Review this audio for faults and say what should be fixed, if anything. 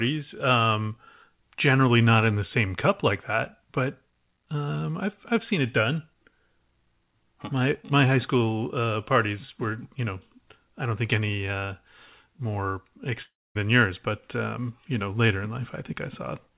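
From 13.22 to 13.57 s there's a long network dropout, likely lost packets: the last sound smears into a fading buzz, then near-silence, and about 340 ms never returns. Worth adding redundancy or FEC and a deeper jitter buffer on that link, while the narrowband path topping out at 4 kHz, which fits G.711, stays as is.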